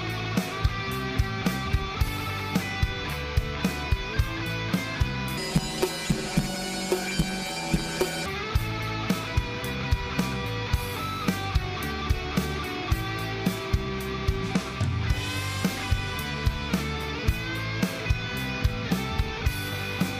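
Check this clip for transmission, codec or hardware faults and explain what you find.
One fault is present. From 5.37 to 8.27 s, planar audio is read as interleaved. Each 10.88 ms block is stored as all-left then all-right samples but is read as alternating pairs, so it plays twice at double speed. These blocks are short, so there is no octave jump. Instead there is a robotic buzz at 91.9 Hz, and the pace stays correct, which rules out a sample-rate mismatch.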